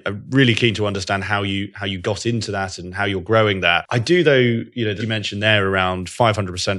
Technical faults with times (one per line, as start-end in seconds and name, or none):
4.99-5.03 compressed frames skipped